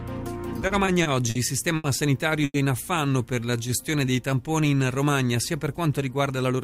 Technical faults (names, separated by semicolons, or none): repeated stalls (stutter); short stall from a late packet; call audio freeze; jitter buffer slow-down; jitter buffer speed-up